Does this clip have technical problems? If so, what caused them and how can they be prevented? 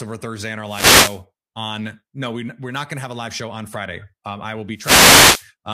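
Yes, two wireless microphone noise hits, at 0.65 to 1.23 s after "and our" and 4.74 to 5.49 s after "I will." The FM radio signal faded as reflections cancelled, so receiver noise swished up over the speech. A diversity receiver with antennas kept in clear line of sight to the transmitter should prevent it.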